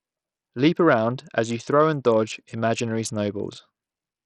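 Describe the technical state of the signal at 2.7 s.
At 2.7 s the speech carries the same damage heard across the whole clip. The sound is dull and gritty. The treble drops out and flickers, and a rough noise clings to the voice. This is likely Bluetooth SBC compression. The heavy damage points to a starved bit budget, which fits a rate near 64 kbps. SBC splits the signal into a few wide bands. It starves the weak upper ones, so treble vanishes and coarse steps add grit and aliasing.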